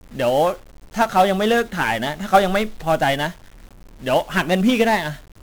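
From start to finish the speech carries heavy 1-bit DFPWM compression damage. Each sample is reduced to a single up-or-down step on an adaptive level, and the density of that bitstream fits a rate of around 48 kbps. The steps can only approximate the waveform coarsely, so strong broadband quantisation noise rides on every syllable. The voice comes across fuzzy and crackly, and its upper frequencies sink beneath a constant hiss.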